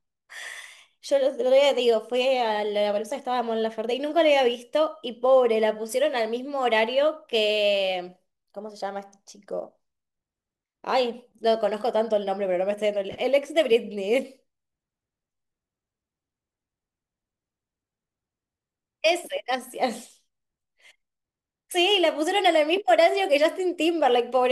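Sample clock jitter runs the whole way through: a wobbly converter clock, around a couple of microseconds, leaves a faint hiss riding louder, brighter speech, roughly 35 dB down.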